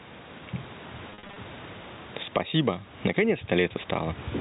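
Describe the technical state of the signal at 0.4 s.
At 0.4 s the speech shows gain pumping, present across the whole clip. The gain swings by around 15 dB, likely from excessive input gain driving a fast limiter or compressor. The level contrast is squashed under a telephone-band ceiling.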